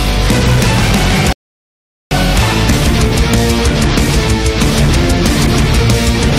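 Hard clipping runs through the whole clip. The signal drives about 8 dB past what the stage can pass, so peaks are sliced flat on roughly 7 percent of samples. Those squared-off tops add high harmonics, heard as a harsh fuzz on every loud moment.

At 1.33 s there is a rebuffering stall. Playback drops to silence until 2.11 s, then picks up exactly where it left off. The player ran dry of downloaded audio and waited for more, adding about 0.79 s without losing any content.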